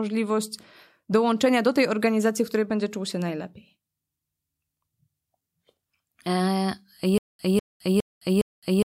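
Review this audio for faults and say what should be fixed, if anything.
From 7.18 s to the end, the speech breaks into a stutter with silent gaps. A 199 ms burst repeats four times, each followed by about 212 ms of digital silence, a 411 ms cycle. The stream likely stalled and replayed its last fragment. Increase playback buffering.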